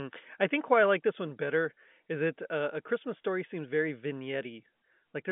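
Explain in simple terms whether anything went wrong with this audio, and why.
Nothing went wrong with this speech recording. It has passed through ordinary G.711 telephone coding, which gives it the narrow sound of a phone line, with nothing heard above about 3.7 kHz.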